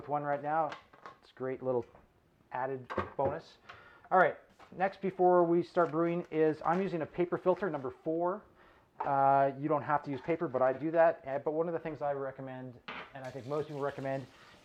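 AAC frame loss with concealment occurs around 10.72 to 10.79 s. Roughly 43 ms of coded audio went missing, which fits a single dropped frame. The decoder filled the gap by reusing the last good spectrum rather than leaving silence. Because the loss is so brief, there is no fade-out. Instead the audio turns into a short smeared, noisy or phasey patch before normal decoding resumes.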